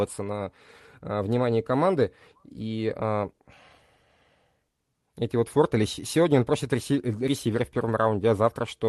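Nothing goes wrong anywhere in this speech recording, which comes through a normal call connection with its top end stopping at around 12 kHz, as you'd expect from that kind of link.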